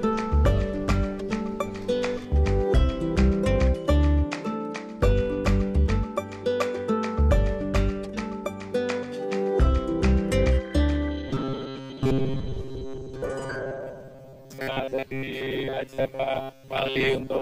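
From 11.29 to 17.41 s, robotic sound from repeated short buffers: a metallic 134 Hz buzz, likely looped 7.5 ms chunks, showing evenly spaced spectrogram stripes.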